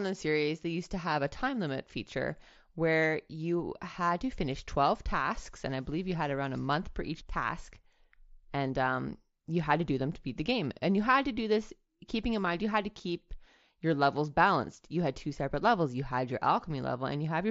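No technical faults are audible.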